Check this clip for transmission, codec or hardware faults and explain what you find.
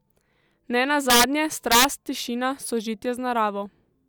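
Integer overflow, at 1.10 to 1.24 s and 1.72 to 1.84 s: the speech peaks were pushed about 5 dB past the integer limit and wrapped to the opposite sign instead of being clamped, so each loud peak flips across the full range as a violent crack, far harsher than clipping.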